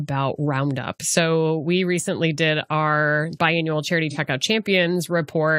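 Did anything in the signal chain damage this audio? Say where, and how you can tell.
Yes: AAC frame loss with concealment at 4.10–4.17 s, after "did our biannual charity". The decoder refilled a 43 ms gap, fitting a single lost frame, from the previous spectrum, leaving a smeared patch.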